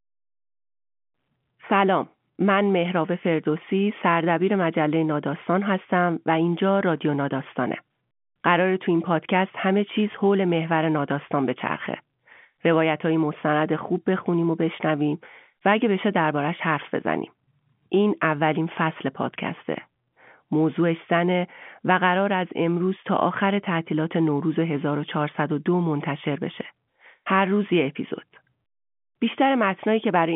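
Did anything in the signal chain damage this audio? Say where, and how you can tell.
No, the only stage that leaves a mark is the G.711 telephone coding, whose 150 Hz to 3.4 kHz line band with nothing above about 3.7 kHz and faint level-following quantisation hiss fits a 64 kbps A-law line working as designed.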